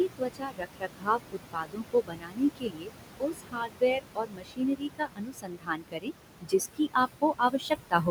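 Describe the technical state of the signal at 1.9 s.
At 1.9 s the speech sounds swallowed and faint, with soft sounds fading out. This is speech cut by the noise suppressor, running from 0.07 to 2.91 s: it mistook parts of the speech for noise and turned them down by as much as about 22 dB, affecting roughly two seconds in all.

Underneath, the background noise sinks between the words and rises under them. These noise suppressor artifacts run throughout, as the suppressor pulls steady noise down by about 22 dB, frame by frame.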